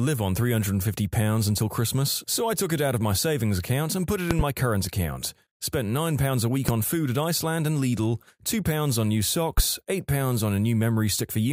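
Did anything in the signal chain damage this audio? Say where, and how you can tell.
Yes. Three loud pops sit on top of the speech, which carries on underneath each one. The first, at 4.31 to 4.43 s, is a quick double pop. Single pops follow at 6.69 to 6.72 s and 9.58 to 9.61 s. They jump well above the speech, by around 20 dB for the first two and somewhat less for the last. The likely cause is a voltage step in the analogue wiring, such as a plug, switch or static discharge, which the following circuits turned into a sharp thump.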